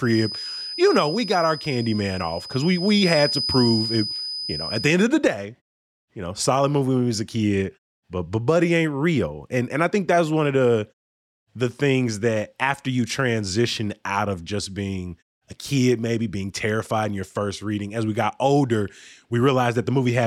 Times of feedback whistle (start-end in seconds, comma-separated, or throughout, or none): 0.00-4.97